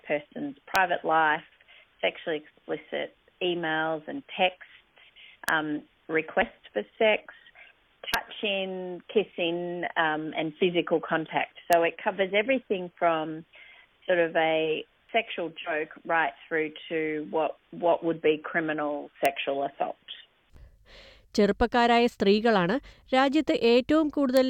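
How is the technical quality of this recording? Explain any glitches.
The recording has a recurring integer overflow fault, with six sharp cracks at 0.76, 5.49, 8.14, 11.73, 19.26 and 24.37 s. At each of those peaks the signal pushes only about 0 to 1 dB past full scale. Instead of being held at the limit, the sample value wraps around to the opposite extreme. That full-range jump comes across as a violent, instant crack, much harsher than ordinary clipping, even though the overshoot itself is tiny.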